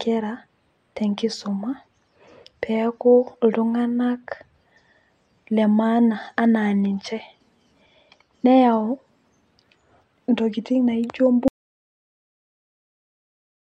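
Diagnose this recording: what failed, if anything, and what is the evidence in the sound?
An audio dropout to silence begins at 11.48 s, right after "intokiting naijo", and lasts to the end of the clip. The speech cuts off mid-flow into silence with no room tone, likely a lost input device or link while the recorder kept writing.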